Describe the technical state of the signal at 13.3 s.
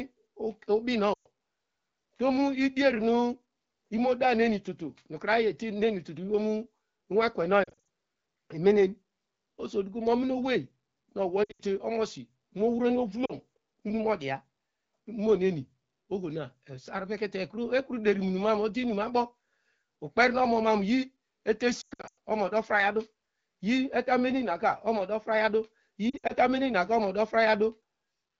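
At 13.3 s there are lost AMR speech frames, from 13.26 to 13.32 s, just after "omosi mohrono". The 40 ms gap fits two 20 ms frames. The AMR-WB decoder repeats the last good pitch and vocal-tract settings at falling gain, producing a brief drop toward near silence before the speech returns weak or rough for a moment.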